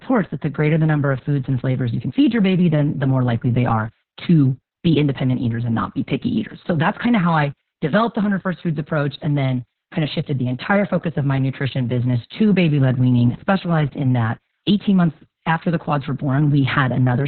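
From start to finish the speech has been through Opus voice compression running its SILK linear-prediction coder in narrowband mode, with the bitrate starved to the point where the excitation is coded only coarsely; the damage fits a rate of about 6 kbps. The band is cut off near 4.3 kHz, so the speech sounds muffled and telephone-like, and the crude excitation adds a hoarse, slightly robotic grain throughout.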